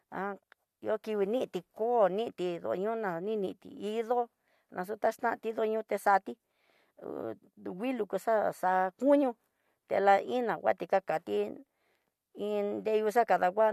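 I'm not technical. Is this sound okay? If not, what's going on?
Yes, this one's fine: nothing is going wrong with the sound, so there's nothing here you need to worry about.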